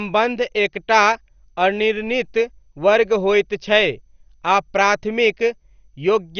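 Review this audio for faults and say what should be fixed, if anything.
The speech is dull and gurgling from start to finish, with nothing above 6.5 kHz, which is likely MP2 compression at a low rate, around 48 kbps. With too few bits, the upper sub-bands are switched off and the remaining bands are coarsely quantised, producing granular distortion. A spectrogram would show a hard ceiling at 6.5 kHz, with patchy, blocky energy flickering below it. To prevent this, encode at a much higher bitrate or use a more efficient codec.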